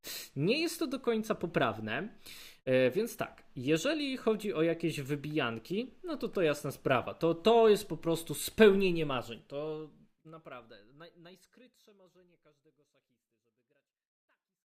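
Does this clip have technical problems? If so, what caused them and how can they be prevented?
No, nothing here needs fixing; the gradual fade-out from about 9 s to the end is a deliberate edit, smooth and free of any click or hard edge.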